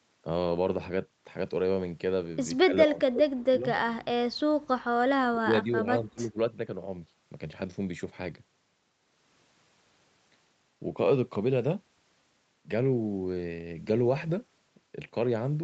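Speech that dips sharply from 2.65 to 3.66 s (by about 30 dB) and from 5.31 to 6.37 s (by about 20 dB), likely speech suppressed in double talk by an echo canceller.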